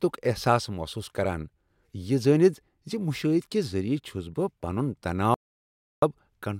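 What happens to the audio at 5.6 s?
At 5.6 s the speech falls into an audio dropout to silence running from 5.34 s to 6.02 s, so about 0.68 s of sound is missing. The input was likely lost briefly while recording continued and wrote silence. The speech stops abruptly and resumes just as abruptly. Unlike a noise gate or a deep fade, the gap holds silence with no room tone or hiss underneath, and nothing spoken during it survives.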